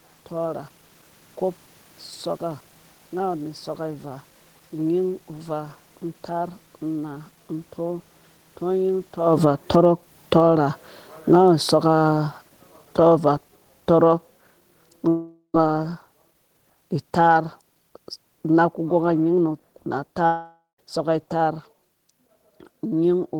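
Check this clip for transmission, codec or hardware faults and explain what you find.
Two kinds of fault are present: automatic gain falling and two long network dropouts.

Automatic gain falling runs from 8.62 to 15.93 s, pulling the speech and background down by about 14 dB, and again from 17.05 to 21.66 s by about 5 dB. The control reads the input as too loud and lowers its gain gradually, so everything sinks together. A separate level shift near 9 s comes from the talker moving.

Long network dropouts occur at 15.08 s and 20.26 s, likely from lost network packets. About 0.45 s and 0.53 s of speech are missing. Each gap is filled with a fading buzz or hiss, then roughly 50 ms and 130 ms of silence, before the audio resumes.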